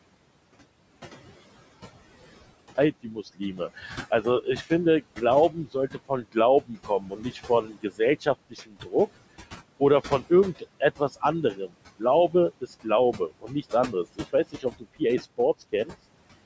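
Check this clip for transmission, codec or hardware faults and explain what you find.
Three faults are present in this speech clip: a dropout to silence at the start, processing artifacts from a noise suppressor throughout, and stretches where that suppressor also cut into the speech.

Audio dropout to silence, 0 to 2.78 s: The clip opens already in a gap of silence, with no room tone at all, and sound only arrives at 2.78 s. This pattern most likely comes from the input being lost while the recorder kept writing silence.

Noise suppressor artifacts, whole clip: The suppressor pulls down bands it judges to be steady noise by about 20 dB, frame by frame. The room noise therefore drops away in pauses and swells back under speech.

Speech cut by the noise suppressor, 3.03 to 8.95 s and 9.8 to 15.94 s: The suppressor misread parts of the speech as noise and attenuated them along with the background, by up to about 19 dB in the first span and about 18 dB in the second. 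Roughly two seconds and one and a half seconds of material are affected, respectively. The affected parts sound swallowed or faint.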